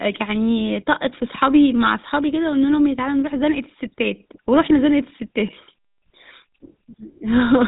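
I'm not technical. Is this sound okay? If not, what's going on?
No. Throughout the speech, the voice sounds buzzy and gravelly, and muffled because nothing above about 3.8 kHz comes through. That's the GSM full-rate codec, an early phone system that rebuilds the voice from a simplified model driven by evenly spaced pulses.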